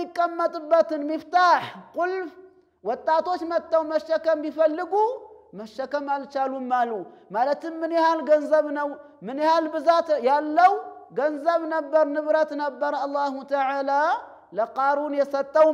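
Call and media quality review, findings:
No audible faults found.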